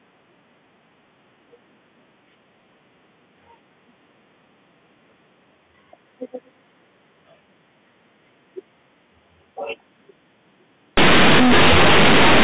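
At 10.97 s the speech breaks into very loud, buzzy distortion. It lasts until the end at 12.43 s. This is companded audio read as linear. Mu-law bytes are played as plain 8-bit samples, never expanded. Quiet sounds become as large as loud ones. Pauses fill with strong noise.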